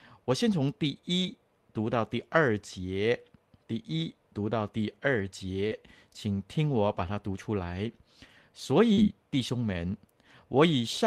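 At 1.21 to 1.27 s there is a lost packet rebuilt from error correction. About 40 ms of speech came from a low-bitrate backup copy carried in the following packet. That fits two 20 ms packets. Nothing drops out. The patch sounds rougher and noisier than its surroundings.

At 5.67 to 5.73 s comes a short concealed packet loss. About 40 ms never arrived in time. The decoder extended the preceding sound to cover the hole, then blended back in. It is heard as a brief smear. Its tail, 5.71 to 5.73 s, is instead rebuilt from error correction, about 20 ms of rougher audio.

Longer error-correction rebuilds follow at 6.91 to 7.05 s and 8.97 to 9.11 s, each about 80 ms of coarse sound. The second is preceded by another concealed loss at 8.93 to 8.99 s. There, about 40 ms is smeared over before the rebuilt stretch takes over.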